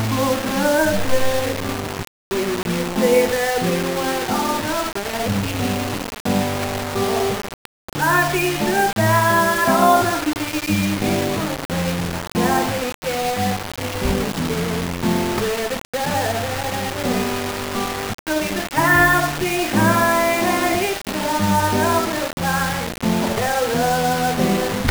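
From start to finish, the sound carries a coarse, grainy distortion. It is the signature of low bit depth without dither. The audio was likely rounded to just 4 bits, giving only sixteen amplitude steps. No dither was added, so the rounding error tracks the waveform. The grit changes shape as the sound changes. The error sits only around 10 dB below the signal. Quiet passages sound rough and broken, and the softest parts sputter between steps or drop out.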